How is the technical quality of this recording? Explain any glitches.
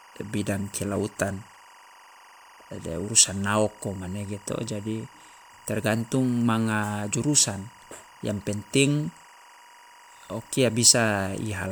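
The recording has one clear technical fault, present from start to finish.

Timecode bleed runs throughout the clip. Linear timecode from an adjacent track or cable has leaked into the audio path. The code is a square wave that flips between two pitches, near 1 kHz and 2 kHz, as it encodes each bit, and its pacing fits 24 frames per second. Sitting roughly 25 dB below the speech, it comes through as a thin, steady chirping warble behind the talking.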